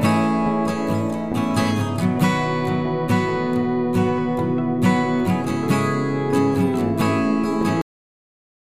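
The sound stops abruptly at 7.81 s, in the middle of whatever is playing, and drops straight to digital silence with no decay for the remaining 0.87 s. This is a cut-off end: the final buffers of audio were never written out or played back.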